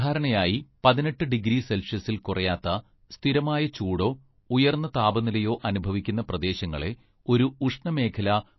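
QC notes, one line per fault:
throughout: MP3 compression. An encoder short of bits has likely lowpassed the signal and dropped weak frequency lines, so nothing is heard above 5.8 kHz, which fits a low bitrate near 24 kbps. The speech sounds dull and plainly watery, with swirling texture and blurred consonant edges.
2.62 s: pre-echo. The codec spread quantisation noise across a whole block containing a sharp onset, so about 18 ms of hiss fills the quiet gap just before "സ്ഥിരമായ ചൂടോ ഉയർന്ന താപനിലയോ", and that attack lands softened and smeared.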